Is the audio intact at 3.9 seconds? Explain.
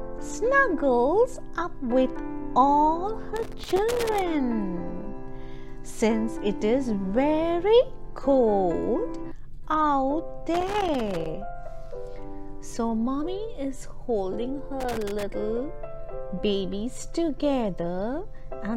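No. At 3.9 seconds the audio sits inside a burst of loose connector crackle running from about 3.36 to 4.22 s. A worn or dirty contact in the signal path is intermittently making and breaking as it shifts, so the signal is repeatedly chopped off and restored, with pops added wherever DC on the line jumps. For those 0.85 seconds the result is an irregular, scratchy crackle over the sound.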